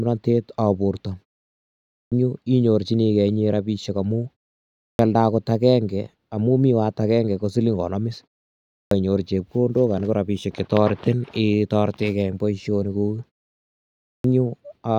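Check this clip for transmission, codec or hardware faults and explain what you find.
There is one hardware fault, repeated four times after pauses in the speech.

Clipped start after a pause occurs at 1.83 to 2.12 s, 4.73 to 4.99 s, 8.64 to 8.91 s and 13.99 to 14.24 s, each following silence of 0.45 to 0.76 s. During those gaps the output device drops into a low-power state, and it needs roughly a quarter second to wake and lock again. The first 250 to 290 ms of each new phrase are lost, so speech bursts abruptly out of silence without its opening sounds.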